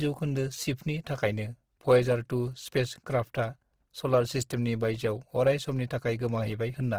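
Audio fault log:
throughout: Opus compression. The speech has a grainy, rough fizz in place of fine detail, likely band-filling noise from Opus music mode, which fits a rate near 16 kbps.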